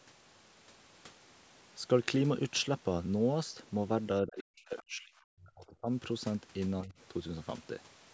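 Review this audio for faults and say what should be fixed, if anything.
Speech suppressed in double talk occurs from 4.22 to 5.89 s and again from 6.82 to 6.94 s. It was likely caused by the echo canceller mistaking the talker for loudspeaker echo while both sides spoke. The speech drops by as much as about 40 dB in the first stretch, and dips by about 10 dB in the second. A double-talk detector that freezes adaptation and eases suppression during near-end speech would prevent this.

The other side's voice leaking through occurs from 4.77 to 4.83 s, likely because the canceller left part of the loudspeaker signal in the microphone. It comes through as a brief scrap about 20 dB below the speech. Stronger residual echo suppression would remove it.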